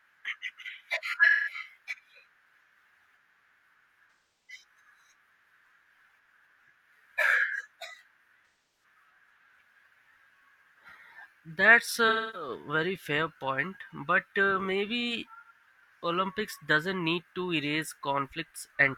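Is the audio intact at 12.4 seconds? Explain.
No. AAC frame loss with concealment covers 12.08 to 12.49 s, just before "very fair point but". About 256 ms of coded audio is missing. The decoder rebuilds it from the last good spectrum. That gives a smeared, noisy patch.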